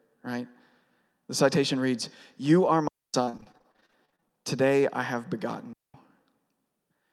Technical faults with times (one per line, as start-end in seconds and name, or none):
2.88-3.14 digital wireless dropout
3.25-4.34 repeated packet loss (robotic sound)
5.73-5.94 digital wireless dropout